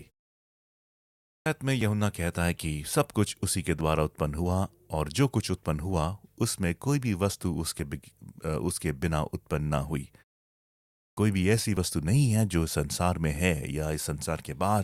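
Clipped start after a pause at 0.94 to 1.46 s: after about 0.9 s of silence, the output device needed time to wake, so roughly 0.52 s of the returning speech is swallowed and it begins abruptly, missing its opening sounds. Overlap between stream segments at 1.81 s, then again at 3.81 s: the time stamps of neighbouring 2-second segments overlap, and the player trims a few milliseconds that were never duplicated, so the waveform jumps with a tiny click or skip. The same overlap skip recurs at 7.79 s. Clipped start after a pause at 10.68 to 11.17 s: following a 0.53 s pause, about 0.49 s of onset is lost again. A final segment-overlap skip falls at 11.77 s, all on the 2-second segment grid.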